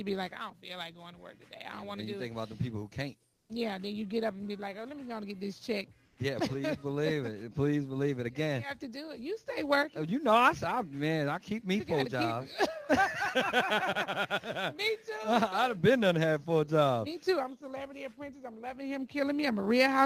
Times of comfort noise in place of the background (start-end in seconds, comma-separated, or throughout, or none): 3.33-3.49, 6.05-6.17